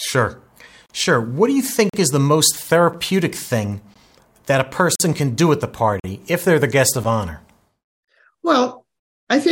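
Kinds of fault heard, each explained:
Gap between stream segments: hard-edged silent holes of about 8 to 45 ms break the speech roughly once a second, at 0.86–0.90, 1.89–1.94, 2.93, 3.94, 4.95–5.00, 6.00–6.04, 7.04 and 8.05–8.08 s. Adjacent one-second segments are timestamped slightly apart, and the player fills each gap with silence.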